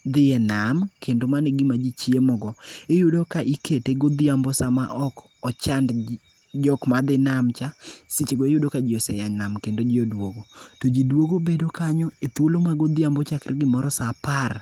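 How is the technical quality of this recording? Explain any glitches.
Nothing here counts as a glitch; the speech comes through the light Opus compression at 24 kbps with its full bandwidth intact.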